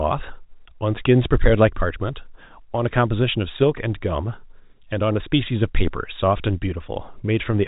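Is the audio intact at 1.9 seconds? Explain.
Yes, the audio is intact at 1.9 seconds, with nothing there beyond the narrow telephone band of the G.711 coding, which passes nothing above about 3.8 kHz.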